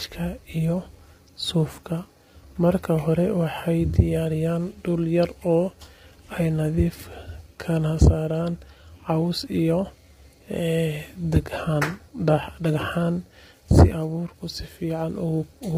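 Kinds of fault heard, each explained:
Low-delay AAC compression: heard throughout the clip, the speech sounds rough and grainy, with noise filling the gaps between the voice harmonics and nothing at all above 15.6 kHz. The likely cause is the low-delay AAC used for video calls. It codes about 500 frequency lines a frame with a low-delay window, and at low bitrates it runs short of bits. The heavy damage here fits a low bitrate of around 24 kbps.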